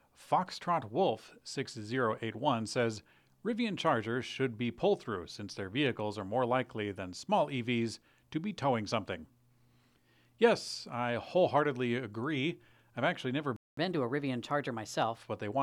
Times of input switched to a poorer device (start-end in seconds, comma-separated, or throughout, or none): none